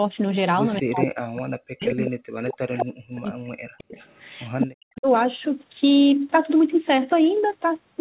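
Speech, and from 0.82 to 3.98 s and again 4.65 to 5.07 s the voice dips by as much as about 40 dB, likely speech suppressed in double talk when the far end spoke over it. There's also echo leak, a copy delayed by 216 ms at 1.01, 1.9, 3.96 to 4.4 and 4.61 s, peaking around 5 dB below the voice, likely from the far-end loudspeaker getting past its echo canceller.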